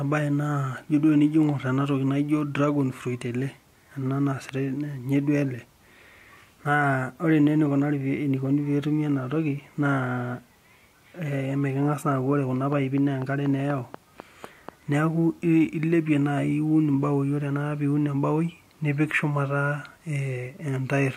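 A train of clicks runs from 12.73 to 14.95 s: about ten regular ticks at 4.1 per second, a little louder than the speech, likely from nearby equipment interference. A corrupt frame was decoded at 20.44–20.47 s, where a couple of damaged frames put stray energy at wrong frequencies, producing a brief error peaking around -30 dBFS.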